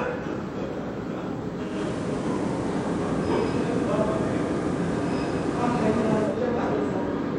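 From 1.63 s to 6.42 s, digital radio blending to analogue: the receiver lost digital reception and cross-faded over 194 ms to FM. Hiss rises to roughly 25 dB below the signal, and the level shifts about 3 dB. It is not a plain filter or dropout, since both change together and reverse at 6.42 s.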